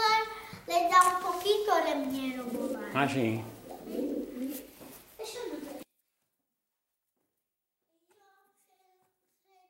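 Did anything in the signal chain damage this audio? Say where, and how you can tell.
Yes. Drift correction steps at 0.53 to 1.27 s and 4.41 to 5.34 s: the sound briefly runs 6.34% fast and rises about 106 cents, roughly a semitone, then snaps back. This is likely a buffer or driver clock-matching stage changing rate in one step to drain its buffer.

One channel inverted from 5.83 s to the end: summed to mono, the centred content drops by about 37 dB, leaving only a faint difference signal. The likely cause is a polarity-reversed conductor in the analogue wiring, so the identical material in both channels cancels.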